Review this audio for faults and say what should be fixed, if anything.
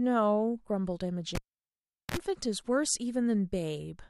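At 1.35 s a pop cuts the speech, and the signal drops to near silence for about 0.77 s. This is a cable pulled and plugged in while live. As the plug goes back, only the tip touches first. That gives a short burst of 60 Hz mains buzz, about 54 ms long. A second pop follows as the speech returns at 2.17 s. To prevent it, mute the channel before reseating any cable and check connectors are secure.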